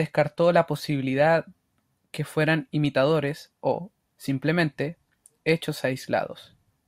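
Speech with clock slip clicks running from 0.11 s to 6.85 s: a fast, faint tick roughly every 40 ms, so about a hundred and fifty of them, blurring into a soft rattle. Likely cause is two unsynced clocks drifting apart by something like 500 ppm, dropping or repeating single samples.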